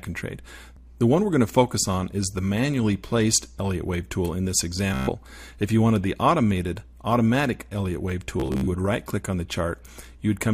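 At 4.94 s a Bluetooth stutter begins and runs to 5.11 s. Packets arrived late or not at all, so the receiver kept replaying its last short buffer. This is heard as a rapid, buzzy repetition. About 140 ms of audio is skipped, and the sound resumes further on. A second stutter spans 8.40 to 8.68 s. Its gaps are scattered, the longest lasting about 60 ms, and roughly 180 ms of audio is lost.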